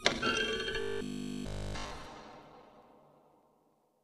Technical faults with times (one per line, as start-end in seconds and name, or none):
0.81-1.93 robotic sound from repeated short buffers